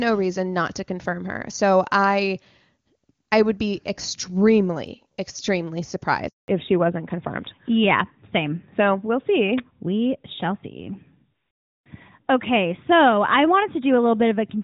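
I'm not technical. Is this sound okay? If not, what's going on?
No. At 6.28 s the speech drops out for 0.2 s. This is a handover gap: the phone switched networks mid-call and no speech got through. From 6.48 s on, the speech sounds duller and rougher, missing everything above 4 kHz, after the clear HD Voice sound before the switch. That's a fallback to narrowband, where the call moved to an older, lower-quality phone format.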